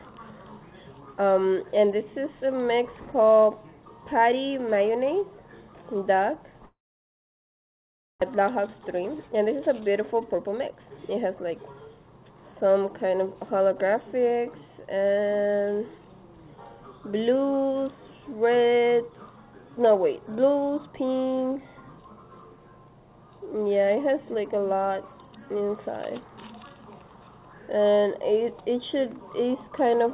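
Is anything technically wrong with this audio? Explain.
Yes, there are two kinds of fault, heard over a call path whose spectrum stops at 4 kHz, which fits G.711 mu-law.

Long network dropout, 6.66 to 8.24 s: the last sound carries on as a fading buzz, then about 1.45 s of near silence follows. The likely cause is a stalled network stream. About a second of audio is never played, and the delay jumps by roughly half a second. The waveform shows a decaying tail, then a flat line. On a spectrogram it is a smeared band that goes blank.

Jitter buffer speed-up, 8.36 to 9.30 s at 107% and 9.81 to 12.11 s at 120%: the receiver trims the backlog by cutting out short pitch-period chunks, about 70 ms and then roughly half a second. The sound is hurried but keeps its pitch. The spectrogram shows the same harmonic spacing squeezed into less time.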